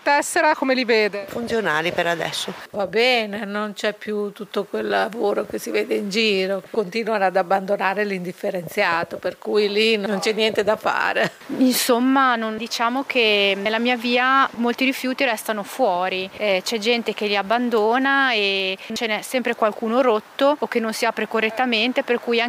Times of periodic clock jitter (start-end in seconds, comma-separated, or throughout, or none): none